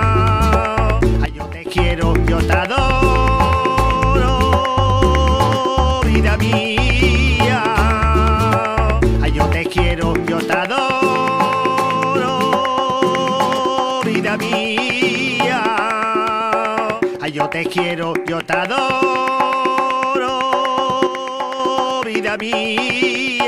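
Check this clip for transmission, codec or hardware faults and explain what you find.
There are two sudden gain jumps. At 1.26 to 1.67 s the level drops by about 11 dB, and at 21.07 to 21.60 s by about 6 dB. Sound and background noise fall together at once, with no fade. The likely cause is a digital gain step applied without a ramp.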